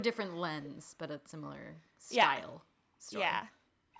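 The echo canceller clamped the microphone while the far end played, so the background was gated: room sound dips about 24 dB from 2.91 to 3.02 s, then about 35 dB from 3.61 to 3.88 s, briefly near-silent. From 3.93 s to the end, a faint delayed copy of the speech, roughly 25 dB down and trailing by about 0.53 s, is likely an echo leak through the far side's loudspeaker path.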